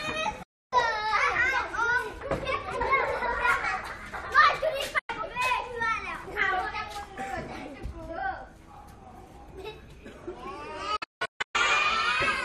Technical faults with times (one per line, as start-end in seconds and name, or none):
0.43-0.73 digital broadcast dropout
4.99-5.10 digital broadcast dropout
10.96-11.55 digital broadcast dropout